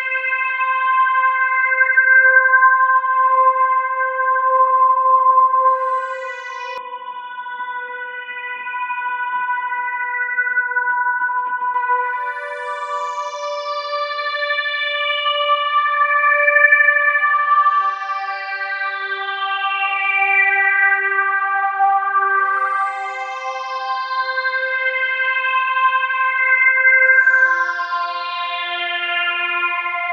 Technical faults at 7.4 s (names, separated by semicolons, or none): input switched to a poorer device